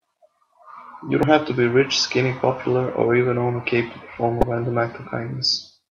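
Speech, with two brief bursts of damaged data in a compressed stream: a short fault at 1.23 s and a longer one from 4.41 to 4.44 s. Corrupted bytes there leave the decoder misreading frames and losing sync until it finds the next valid frame header. On a spectrogram each shows as a narrow vertical break. The waveform shows an abrupt, jagged discontinuity.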